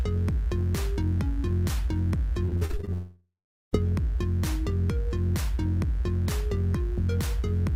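A dimmer, rectifier or shielding fault is letting 60 Hz mains interference into the signal path for the whole recording. Sharp switching spikes, twice per mains cycle, add a ladder of 60 Hz harmonics reaching into the kilohertz range. The result is a steady, raspy mains buzz about 30 dB below the wanted signal, present from start to finish behind the audio.

From 2.45 to 2.89 s the network connection repeatedly failed to deliver packets in time, producing repeated packet loss with a robotic sound. The receiver bridged each hole by extending the last sound it had, then met the next hole almost immediately. Eight short gaps fall in that span, the longest about 46 ms, and patching covers nearly half the stretch. The sound turns choppy and mechanical, with small pieces missing.

Right after that, from 2.93 to 3.75 s, comes a long network dropout, likely an interruption in which nothing arrived for about 0.8 s. 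The receiver first stretches the final fragment into a fading buzz or hiss, then gives up. Roughly 0.39 s of that gap is plain silence. When the audio resumes at 3.75 s it picks up further along, and the material from that gap never returns.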